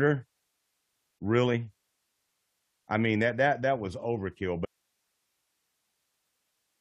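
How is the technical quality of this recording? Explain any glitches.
There is one clear glitch. At 4.65 s the speech cuts off abruptly and never returns; from there to the end only faint hiss remains, roughly 50 dB below the speech. This audio dropout to a faint residue likely comes from the signal feed breaking while the recording path stayed live.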